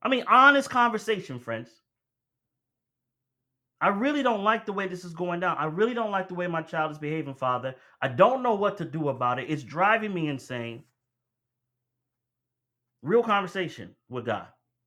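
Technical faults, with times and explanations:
Nothing technical stands out in this speech recording; there's nothing to flag here.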